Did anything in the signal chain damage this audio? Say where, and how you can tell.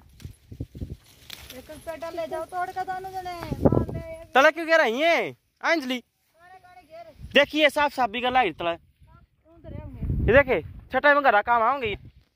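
Yes. Near the end, at 11.93 s, there is a short smeared blip where the sound jumps forward by roughly a tenth of a second. This is compressed frames skipped, a codec or storage fault: about four whole frames never reach the output, either missing from the file or rejected by the decoder as corrupt. The size of the jump fits a frame length of about 26 ms. Overlapping neighbour frames soften the splice into a brief smear instead of a sharp click.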